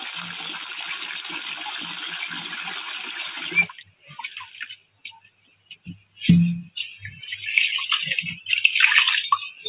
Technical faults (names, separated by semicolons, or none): noise suppressor applied to music or sounds; sound cut by the noise suppressor